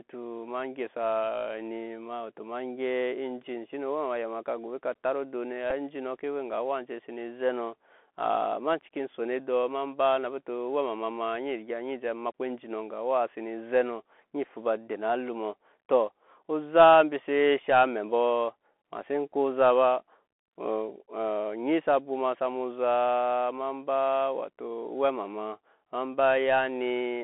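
A speech recording heard through a Bluetooth CVSD headset codec from start to finish. The sound sits in a narrow phone band, roughly 250 Hz to 3.4 kHz. The damage is plainly audible. CVSD codes each sample as a single up-or-down step whose size adapts, which fits a 64 kbps stream. Sharp, loud high sounds outrun that step and smear. Sibilants turn scratchy. A grainy hiss runs underneath everything. Two brief Bluetooth headset packet repeat events also occur. At 5.70 s there is a short buzzy tick lasting about 7.5 ms. That points to two lost packets, with the last good one decoded again in their place. At 19.32 s a smaller tick covers about 3.8 ms, consistent with one repeated packet. Each repeat reuses 3.75 ms of stale audio. Good packets return quickly, so neither event builds into a sustained buzz.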